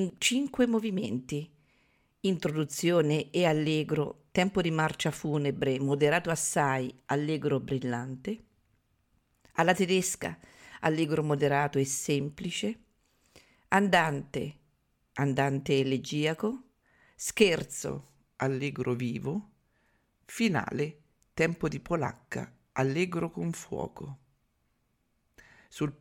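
Speech that, from 17.89 s to the end at 26.00 s, has a wrong sample rate: it runs at 0.919 speed and about 1.5 semitones lower, which fits 48 kHz audio played at 44.1 kHz. Unlike a pure pitch shift, pitch and tempo drop together.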